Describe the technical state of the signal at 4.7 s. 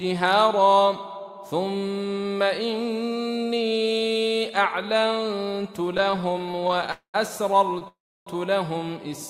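At 4.7 s the signal is intact, with no dropout, distortion, glitch or other technical fault audible at that point.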